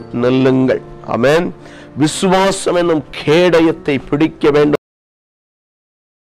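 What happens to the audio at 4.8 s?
At 4.75 s the sound is chopped off mid-event: a cut-off end. The final buffers were never written out, so playback falls straight to digital silence with no natural decay, and that dead silence runs from 4.75 s through to the end.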